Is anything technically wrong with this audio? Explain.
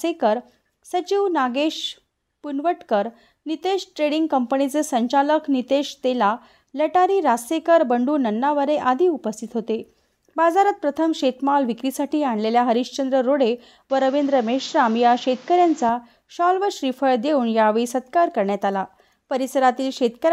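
Yes. From 13.90 to 15.89 s the sound turns duller and boxier, with nothing above 7.6 kHz and new background noise roughly 30 dB below the signal, at an unchanged level and with no gap. This is likely an input switched to a poorer device with narrower bandwidth and its own noise.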